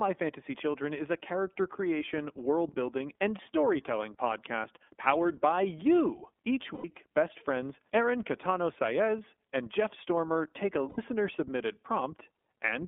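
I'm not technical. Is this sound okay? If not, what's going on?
No. The whole clip goes through the iLBC codec, an internet-phone voice coder. Speech sounds thin and slightly rough and synthetic, more than a plain phone line would.

There are also two lost iLBC frames moments, at 6.74 s just before "best friends" and at 10.89 s just after "take a". Each is a brief buzzy held sound, not silence, lasting about a tenth of a second, and then the voice snaps straight back.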